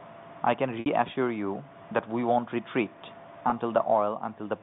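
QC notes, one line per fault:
0.80–0.86 s and 3.50–3.52 s, packet loss with pitch repetition: a brief held, buzzy tone replaces the speech and fades into silence at the longer gap. About 60 ms and 20 ms of audio went missing, which fits three packets and one packet of 20 ms each. The receiver filled each gap by looping the last pitch period. The narrowband G.711 telephone coding underneath adds only faint damage.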